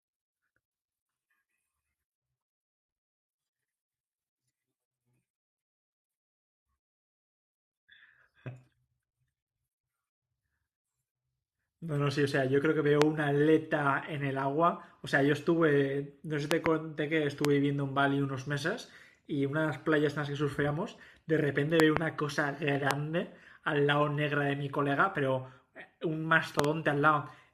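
Loud pops sit on top of the speech at 13.02 s, 16.51 to 16.68 s (a double), 17.45 s, 21.80 to 21.99 s (double), 22.91 s and 26.59 to 26.67 s (double), peaking some 20 to 25 dB above it. These are likely voltage spikes from a plug, switch or static. Unlike dropouts, the speech carries on unbroken underneath each thump.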